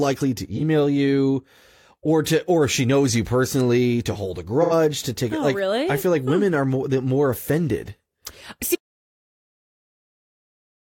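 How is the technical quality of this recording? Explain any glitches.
There are three glitches in this speech recording: two brief AAC dropouts and one complete cutout that runs to the end.

At 0.56 s, right before "you or to or", and at 4.62 s, between "personally to hold a" and "to take it oh", you hear AAC frame loss with concealment. The decoder patches missing frames with a guess built from the last good spectrum, so these gaps of about 43 ms and 85 ms come out as short smeared, noisy blurs. The first is one frame's worth, the second two.

From 8.75 s to the end, there's an audio dropout to silence. The sound stops dead mid-flow and is replaced by silence, with no room tone at all. That points to the input likely being lost, through a disconnect or a mute, while the recorder kept writing.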